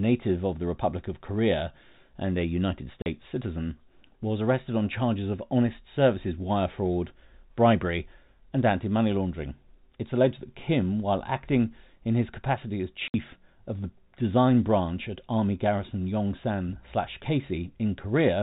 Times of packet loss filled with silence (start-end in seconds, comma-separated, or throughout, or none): 3.02-3.06, 13.08-13.14